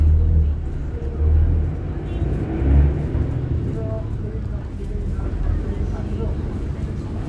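A recording of sounds, with no technical faults that can be heard. Nothing in the audio points to a problem in how it was captured or delivered.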